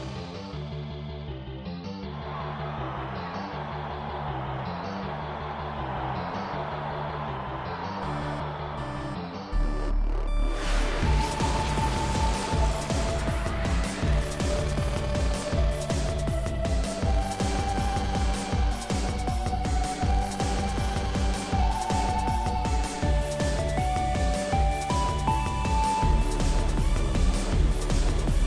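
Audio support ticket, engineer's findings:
No technical faults found in the signal path; playback is continuous and stable, with no audible defects anywhere in the recording.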